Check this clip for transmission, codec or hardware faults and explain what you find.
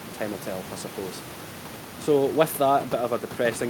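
Nothing in the speech points to a transmission, codec or hardware problem, and the room noise, sitting about 15 to 19 dB under the voice, belongs to the recording itself.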